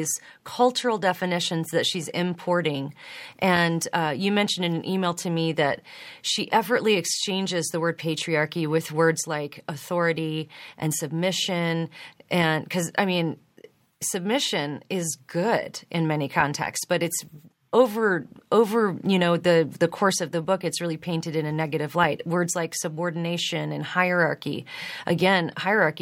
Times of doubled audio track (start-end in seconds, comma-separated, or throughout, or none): none